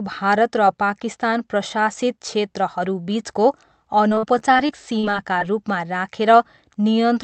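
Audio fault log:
4.09–5.43 s, repeated packet loss (robotic sound): the stream keeps dropping short pieces, the longest about 42 ms, each patched by extending the preceding sound, so nearly a fifth of this stretch is filled-in audio that sounds choppy and robotic.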